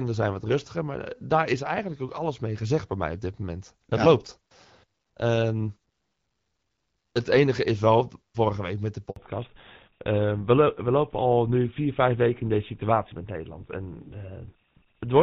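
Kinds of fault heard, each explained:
Handover gap: as the call switches networks right after "vorige week met de", speech frames stop arriving and the sound drops out for 60 ms, from 9.10 to 9.16 s. A waveform shows a flat silent stretch, and a spectrogram shows a thin vertical blank band across all frequencies.
Fallback to narrowband: from 9.16 s to the end, the call has moved from HD Voice to an older narrowband codec, which fits GSM full rate. Everything above 4 kHz is gone, so the speech sounds duller and boxier. A spectrogram shows the energy ending at a hard horizontal ceiling.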